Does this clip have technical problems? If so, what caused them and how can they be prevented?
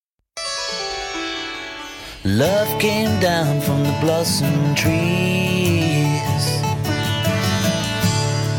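No, nothing in this music stood out as a technical problem on listening, so there is nothing here to trace back or prevent.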